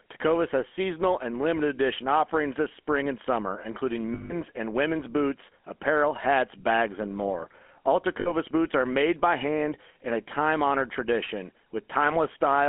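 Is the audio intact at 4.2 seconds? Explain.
No. Lost GSM frames span 4.14 to 4.33 s, after "spring and summer including": the decoder repeats the last good frame, giving a rough metallic ring. A spectrogram shows smeared, repeated bands up to the words "and women's boots apparel". The whole clip also carries the GSM full-rate codec's buzzy roughness, with nothing above 4 kHz.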